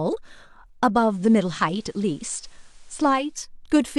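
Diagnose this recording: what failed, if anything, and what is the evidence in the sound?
The hybrid radio receiver lost its digital signal and made a digital radio blend to analogue FM, cross-fading over about 0.3 s at 0.94 s and returning at 3.42 s. In between, hiss sits roughly 35 dB below, with level unchanged.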